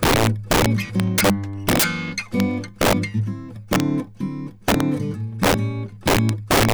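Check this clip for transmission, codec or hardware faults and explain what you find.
The music has an integer overflow fault. Violent, sharp cracks hit its loud passages at 0.03–1.30 s, 1.69–1.84 s, 2.40 s, 2.81–2.93 s, 3.73–3.80 s, 4.68–4.80 s, 5.43–5.54 s and 6.08–6.73 s. Peaks driven up to about 11 dB past full scale wrapped to the opposite sign instead of being limited.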